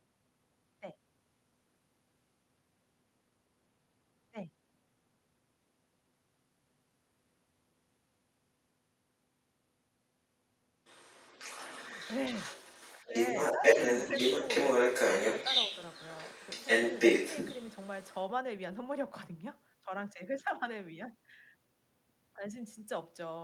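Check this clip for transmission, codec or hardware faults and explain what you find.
Two echo-related faults occur in this speech clip, both during one stretch of two-way conversation.

Other side's voice leaking through, 10.84 to 18.2 s: the echo canceller likely failed to remove the far end's loudspeaker sound, so a second voice persists, sitting roughly 10 dB relative to the talker.

Speech suppressed in double talk, 12.99 to 13.14 s and 13.58 to 13.64 s: with both sides talking, the canceller likely clamped everything down. The talker's voice dips by about 10 dB, then about 5 dB.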